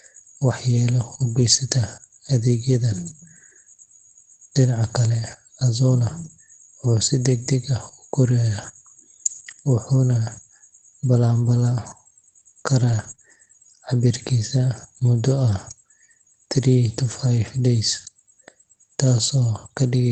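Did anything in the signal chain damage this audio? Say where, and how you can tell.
Yes. The damage happened on the network leg of a WebRTC call, where the receiver's Opus decoder had to cover for missing packets.

Lost packets rebuilt from error correction, at 1.29–1.43 s, 5.91–5.93 s and 12.87–13.13 s. There are no gaps. Instead the speech turns briefly rougher and noisier, then clears. Opus carries a low-bitrate copy of each frame inside the next packet. When a packet goes missing, the decoder plays that coarser copy. The lengths fit runs of about four packets, one packet and seven packets.

Short concealed packet loss, at 13.15–13.20 s, right after the last rebuilt stretch. For about 20 ms the decoder had nothing at all, not even a backup copy, so it extended the preceding sound and crossfaded back into the real signal. That is heard as a brief smear or wobble. The coding texture of the call path around it fits wideband Opus at roughly 24 kbps.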